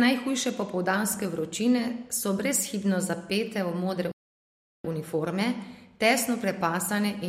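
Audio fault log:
4.12–4.85 s playback stall: sound cuts after "brezhibno zapete v modre" for 0.73 s, likely from data starvation or a blocked player thread. The waveform goes flat and the spectrogram shows an empty band until "uniforme tesno".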